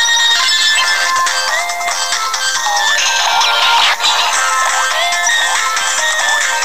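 From start to finish, the audio carries grainy distortion that shifts with the sound. Quiet passages turn gritty. The likely cause is low bit depth without dither, about 5 bits, truncated. The error sits only about 25 dB below the signal.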